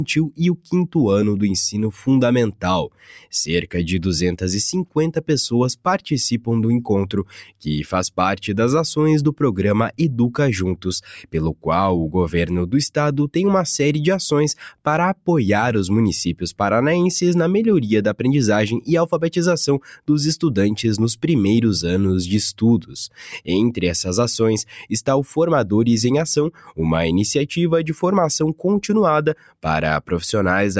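A speech-oriented noise suppressor has been left running on this sound, and you can hear it throughout: held parts and tails keep getting pulled down a few dB while attacks pass, so the level gently pumps and thins instead of sitting steady. It's worst where the suppressor plainly cuts sound outright, taking it for noise: 2.88–3.32 s (about 12 dB down), 7.25–7.64 s (about 11 dB), 26.52–26.76 s (about 12 dB) and 29.35–29.64 s (about 10 dB), each a brief sag where sustained material collapses. The call-style microphone processing it passed through also caps everything at 8 kHz.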